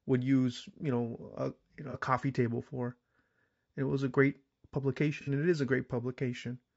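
The whole speech clip has a rough, grainy edge, with noise between the harmonics and a thin, synthetic top end. That's likely low-delay AAC compression, AAC-ELD with its short frames, at a rate that fits about 32 kbps.

Right after "you know", around 1.91 to 1.96 s, there's a brief smeared, noisy patch before "coffee table for". That's AAC frame loss with concealment: about 30 ms of audio went missing and the decoder patched it from the last good spectrum.

A second, longer dropout of about 60 ms sits at 5.21 to 5.29 s, just before "and it is a".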